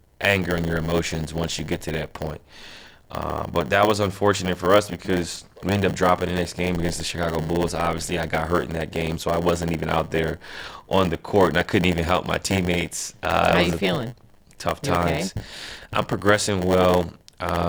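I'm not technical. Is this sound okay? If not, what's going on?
No. There's a block size mismatch (padded) throughout: one part of the system hands over chunks of audio slightly shorter than the next part expects, so it fills each gap with silence. That happens 100 times a second, causing a steady buzz, and the speech plays about 8% slow.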